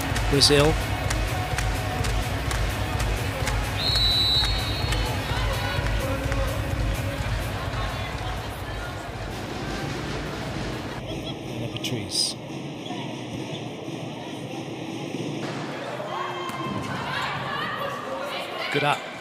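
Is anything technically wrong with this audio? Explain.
Yes. From about 11.00 to 15.43 s the sound turns hollow and phasey, as though heard through a tube. This is channel delay (comb filtering): one channel arrives roughly a third of a millisecond behind the other, and when the two are summed to mono their shared content cancels at evenly spaced frequencies. The first notch falls around 1.5 kHz, with further notches repeating higher up, carving fixed gaps into the spectrum.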